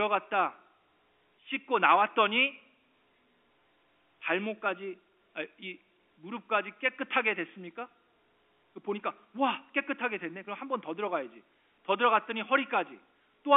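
Nothing goes wrong anywhere in this bit of speech; it just sounds like an ordinary phone line using G.711 telephone coding, with the narrow band of roughly 300 Hz to 3.5 kHz you'd expect from a call.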